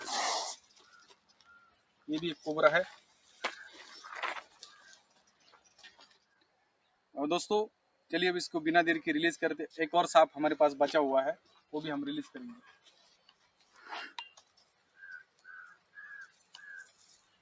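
A noise suppressor applied to music or sounds runs through the whole clip. Built for speech, it treats steady tones, ambience and reverb as noise and pulls them down, so the level swings by around 20 dB as it decides what to keep. The call microphone processing stays within its normal band, with nothing above 8 kHz.

Sound cut by the noise suppressor is heard at 0.60 to 2.07 s, 3.01 to 3.36 s, 4.46 to 7.14 s, 7.70 to 8.10 s, 11.38 to 11.72 s, 12.74 to 13.76 s, and from 14.38 s to the end. Each time the suppressor judged the sound to be noise and lowered it by about 8 to 12 dB at its deepest, sinking it below the surrounding level.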